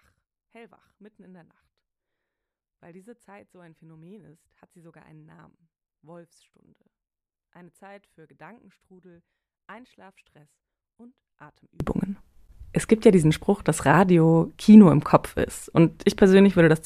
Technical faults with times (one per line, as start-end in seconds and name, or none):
0.00-11.80 one channel inverted